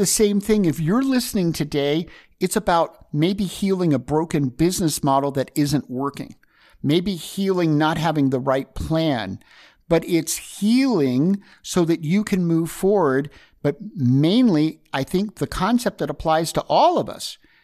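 No technical faults are audible anywhere in this speech.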